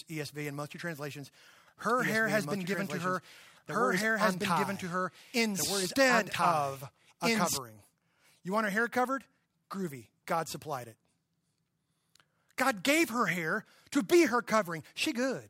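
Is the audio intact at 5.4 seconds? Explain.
No, at 5.4 s you're inside a doubled audio track that runs from 1.90 to 7.58 s, kicking in right after "most of your translations". A second full-band copy of the speech trails the original by about two seconds at roughly the same level. It's likely a second, slower capture path or an edit holding two copies out of step. There's no decay or room colour on the copy, and it cuts in and out abruptly.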